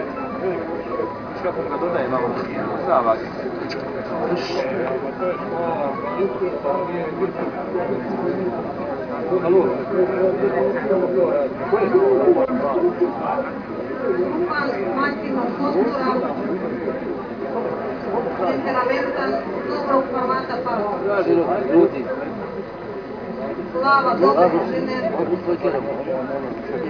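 Nothing in the audio stood out as a technical fault on listening.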